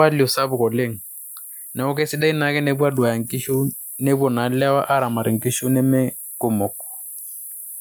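Right at the start, from 0.05 to 0.96 s, there's automatic gain falling: the AGC decides the speech is coming in too hot and backs its gain off by about 5 dB, so the level starts loud and then sinks, background and all.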